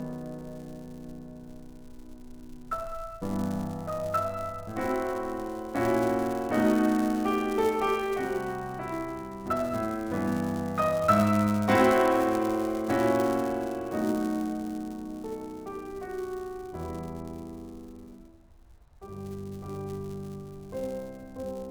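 A steady 200 Hz buzz rides on this music throughout, rising and falling with its level: a filter restarted on every block, forgetting its state, so each block starts with a transient.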